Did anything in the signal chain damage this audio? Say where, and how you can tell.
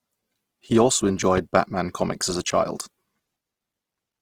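Yes, at the codec stage. Throughout, the speech sounds rough and grainy, with tonal detail turned into noisy fizz rather than swirly holes, though the bandwidth stays full. That points to Opus compression, likely in its CELT music mode, starved at a rate fitting roughly 16 kbps.

There's also one loud pop, from 1.37 to 1.40 s, just before "batman comics as a". It peaks about 10 dB above the speech, which carries on underneath. That sharp transient likely comes from a voltage step in the analogue wiring, such as a plug, switch or static discharge.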